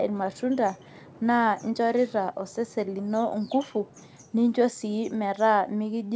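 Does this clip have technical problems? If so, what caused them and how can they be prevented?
No, there's nothing wrong to fix here: the speech just has the ordinary sound of a wideband call, with nothing above about 8 kHz, which fits a codec like G.722 doing its normal job.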